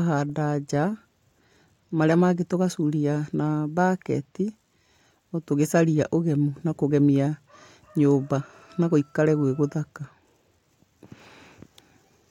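Speech recording with nothing technically wrong to point to. No timestamps or causes apply here.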